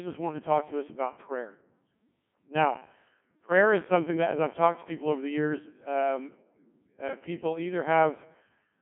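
From start to finish the speech runs through a Codec 2 vocoder, and the damage is heavy: the voice comes out robotic and buzzy because it's rebuilt from sine waves rather than the original waveform. It's squeezed to roughly 150 Hz–3.4 kHz with nothing above 3.8 kHz, which fits a very low bitrate around 1.6 kbit/s.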